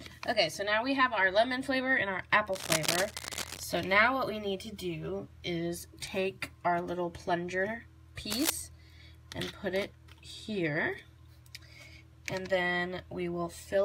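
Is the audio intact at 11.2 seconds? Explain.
Yes, the audio at 11.2 seconds is intact, with no dropout, click, distortion or other fault at that moment.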